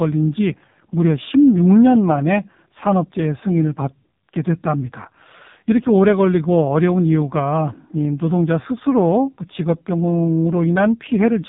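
An AMR narrowband mobile codec sound runs through the whole of this speech clip, from start to finish. The top end stops dead at about 3.8 kHz, as expected when audio is squeezed into an 8 kHz-sampled phone channel, and the heavy coding damage gives the voice a buzzy, synthetic edge. That harshness fits a very low AMR-NB mode around 5.15 kbps, where each 5 ms gets only a few pulses to drive the vocal-tract model.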